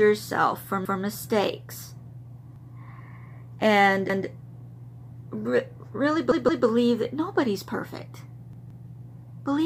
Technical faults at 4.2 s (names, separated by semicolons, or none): repeated buffer